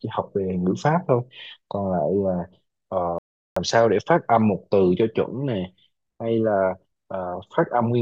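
At 3.18 s the speech cuts out for 0.38 s, a playback stall, likely the player running out of data, before resuming at 3.56 s.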